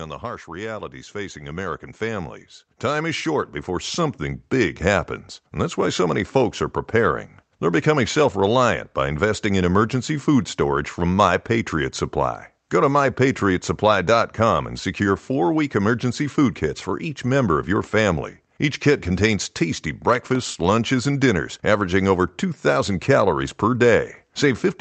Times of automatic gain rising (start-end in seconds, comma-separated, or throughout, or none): 0.47-4.25